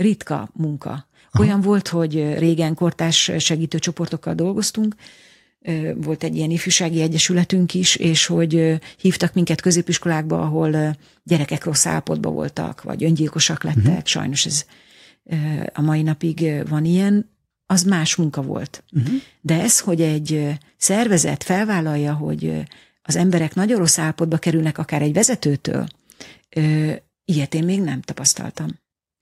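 A speech recording with nothing technically wrong to point to anywhere along its run.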